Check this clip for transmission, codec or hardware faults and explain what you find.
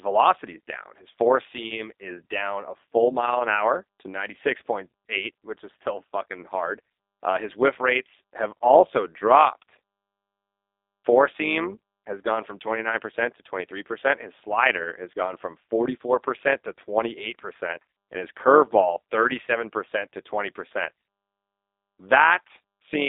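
Two faults run through the whole speech clip, one codec and one processing.

G.729 codec, start to finish: the speech is rebuilt from a vocal tract model and a handful of pulses, with damage you can plainly hear. It's rough and faintly synthetic, band-limited to roughly 300 Hz–3.7 kHz with nothing above 4 kHz, which fits an 8 kbit/s G.729A link.

Overlap-add ripple, also throughout: the frames were stitched back together with overlaps that don't sum to a flat gain, so the level dips and swells by about 6 dB once per frame, at around 100 Hz. You hear it as a metallic buzz over everything.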